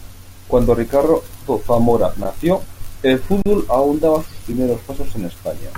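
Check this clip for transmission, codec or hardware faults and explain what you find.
The speech has three brief dropouts, all an underrun with held sample. They occur at 2.24 s (about 11 ms, which fits a 512-sample buffer), at 3.42 to 3.46 s (about 37 ms), and at 4.52 s (about 5 ms). Each time the output buffer ran dry and the converter froze on its last value. The sound goes flat and silent with little or no click. It then resumes where it stopped, so nothing is skipped and the re-entry is soft.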